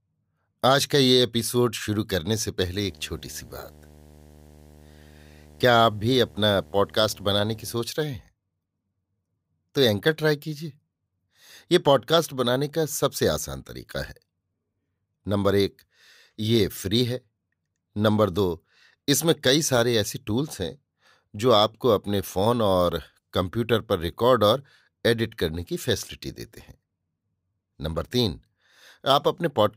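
From 2.74 s to 7.74 s a steady buzz with a gritty hash riding above it sits under the speech, about 25 dB below its level, then stops. This is video or display buzz: a screen or video cable near the audio path has coupled its refresh signal into the recording. The buzz repeats at 75 Hz, the picture's field rate, so the interference follows the display's vertical scan.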